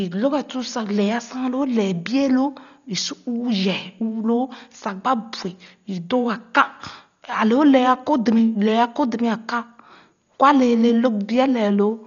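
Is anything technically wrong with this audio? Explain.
Yes. Throughout the speech, the encoder appears to have been starved of bits: the band stops at about 6.9 kHz, and the heavy damage fits a bitrate around 40 kbps, likely from Dolby Digital compression. At that rate the coder drops the upper band and leaves many frequency lines with no mantissa data, so the decoder fills them with noise. The result is dull, muffled audio with a rough, fluttering grain around tonal parts of the speech.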